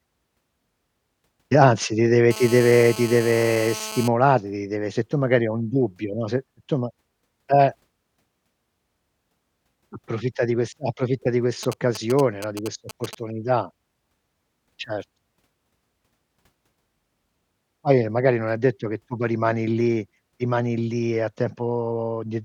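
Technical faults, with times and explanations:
2.31–4.08 s, GSM phone buzz: a nearby 2G phone in a call pulses its radio about 217 times a second, and the audio circuit rectifies it into a hard, raspy 217 Hz buzz, about 13 dB below the speech, between "anzi ti deve" and "ti deve se tu".
11.63–13.15 s, GSM signalling bursts: a nearby 2G phone sends short groups of radio bursts that the circuit rectifies, giving a galloping dit-dit-dit of short 217 Hz buzzes, roughly 15 dB down, after "di questa approfitta di".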